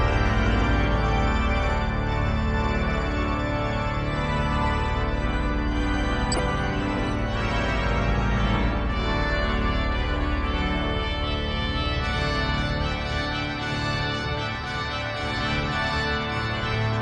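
MP2 compression runs through the whole clip: the sound is dull, with a gurgling, granular distortion that is plainly audible, and this is likely the result of MPEG Layer II coding at a low rate, one that fits roughly 80 kbps. That coder splits the signal into 32 equal sub-bands and shares out a limited number of bits, so upper bands drop out and flicker on and off while the remaining ones are coarsely quantised.

DAB burbling appears from 6.32 to 6.39 s as a brief bubbling, watery disturbance. This happens when reception errors slip past the error correction into the MP2 data. Corrupted samples put short noise blips into individual sub-bands, and corrupted scale factors, where they get through, make sub-bands jump in level for up to a frame. The length fits about three damaged frames, with a bit error rate somewhere around a few tenths of a percent.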